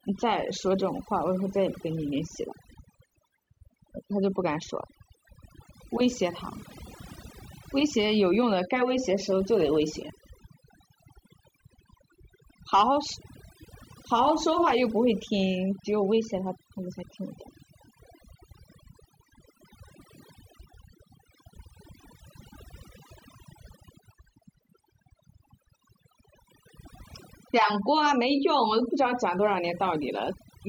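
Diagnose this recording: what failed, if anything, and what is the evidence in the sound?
Overdone noise removal in the call processing stage, throughout: the background drops and breaks up into twinkling specks as quiet frequency bands are gated away.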